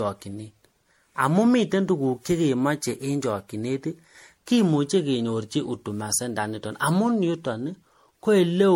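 Speech with generation loss throughout: swirly, hollow, smeared sound, blurred attacks, nothing above 16.5 kHz, likely from about seven MP3 passes near 64 kbit/s.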